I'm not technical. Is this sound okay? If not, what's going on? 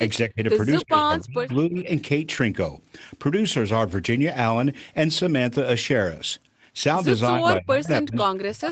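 No. At 0.28 to 0.4 seconds, again from 0.82 to 1.87 seconds, and from 7.36 seconds to the end, the voice suddenly sinks, sounding faint or choppy. This is likely speech suppressed in double talk: the call's echo control mistook the talker for echo while the other side was speaking, and turned the talker down.

From 2.37 to 2.39 seconds there is a tiny rough, fuzzy blip rather than a gap. This is a lost packet rebuilt from error correction: one piece of the call went missing, and a lower-quality spare copy filled the hole.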